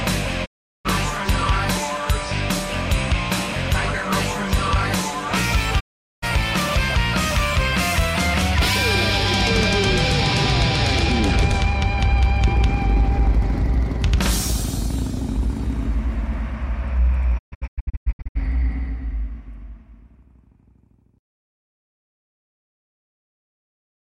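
Digital broadcast dropouts hit at 0.44 s, 5.79 s and 17.37 s: the receiver lost valid frames and muted, fading out over about 20 ms. The first two holes last roughly 0.4 s each. The third breaks into several short gaps, none longer than 128 ms, spread across about a second.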